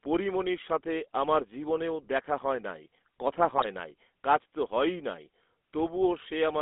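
Speech heard through a GSM full-rate codec for the whole clip: band-limited to roughly 250 Hz to 3.5 kHz, with the buzzy, gravelly roughness of pulse-driven excitation, which fits the old 13 kbps GSM coder rather than a clean narrowband phone line. From 3.58 to 3.66 s, GSM bit errors add a brief squawk and gargle, consistent with a few corrupted frames. Packet loss would leave gaps or repeated sound instead; these corrupted frames distort the spectrum and level.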